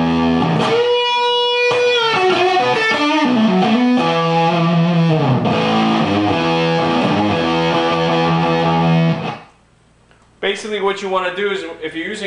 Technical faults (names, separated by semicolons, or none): none